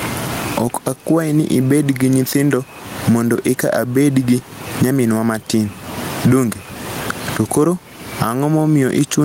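Throughout the speech, the input gain is likely set far too high, with a fast limiter pulling it down on every loud sound. This gain pumping swings the level by about 25 dB. The room noise sits about 34 dB below the speech, which sounds squashed.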